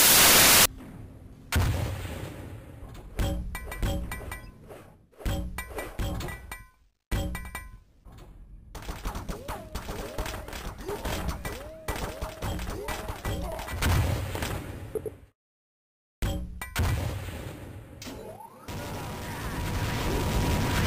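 From the start to 0.66 s, the reader assembles each sample from the wrong bytes, misaligned or in swapped order, so the rapidly changing low bits land in the high positions. The result is samples built from the wrong bytes: loud, harsh broadband noise.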